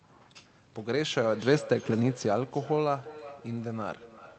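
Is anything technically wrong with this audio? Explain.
Yes, there's a feedback echo between two devices, starting at about 0.77 s and running to the end of the clip. Two devices in the same room are on one call, so each mic picks up what the other plays and sends it round again. Each device's echo canceller only removes its own playback, so the loop isn't caught. You hear the speech come back roughly every 0.4 s, thinner and more ringing each pass, peaking around 16 dB below the direct speech. The Opus coding underneath caps the band at about 8 kHz.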